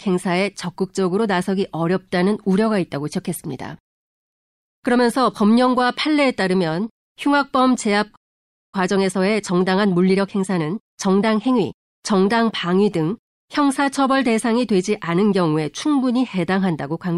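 Speech, with a playback stall from 8.15 to 8.74 s: the sound cuts off mid-flow for about 0.57 s, likely because the player ran short of data, and shows as a flat, empty gap in the waveform and spectrogram. A time-compressed catch-up then runs from 8.74 to 11.74 s, with the speech hurried to 1.15 times normal speed at unchanged pitch. On a spectrogram, syllables and pauses sit closer together while harmonic spacing stays put.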